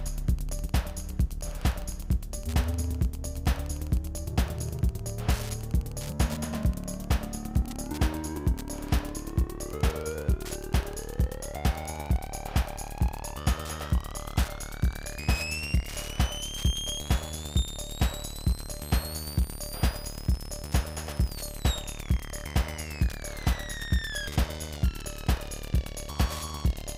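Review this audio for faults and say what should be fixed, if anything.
Wi-Fi interference throughout: the audio circuit rectifies a nearby radio's 102.4 ms beacon, producing ticking about ten times a second, roughly 25 dB down. To prevent it, keep Wi-Fi devices away from the audio gear and cables, and use shielded, balanced connections.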